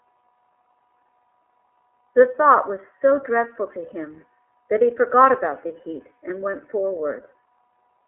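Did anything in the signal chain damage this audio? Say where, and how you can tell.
Yes. The codec stage: the whole clip is confined to a 300 Hz to 3.4 kHz telephone band, and the speech has the rough, slightly synthetic texture of iLBC coding, which fits its 15.2 kbps mode. A plain band-limiting filter would narrow the sound without adding that grainy excitation.

Network stage: lost iLBC frames at 5.68 to 5.71 s, a gap of about 20 ms that fits one dropped 20 ms frame. It is filled with a brief held, slightly buzzy or breathy vowel-like sound, not silence or a click, and the voice comes back cleanly at once because each iLBC frame decodes without the previous one.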